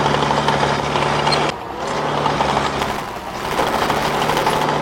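At 1.50 s a CD skip occurs: the laser jumps a track on the disc spiral, giving a brief mute and tick, then a single displaced restart rather than a continuous buzz. From 2.79 to 4.64 s, buffer tearing sets in: writer and reader pointers have crossed, splicing a sliver of audio from about 10 ms earlier into each period, making a steady 200 Hz rattle, not a one-off jump.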